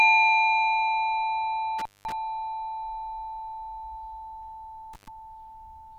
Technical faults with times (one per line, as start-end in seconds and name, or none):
1.79-2.12 intermittent contact
4.93-5.08 intermittent contact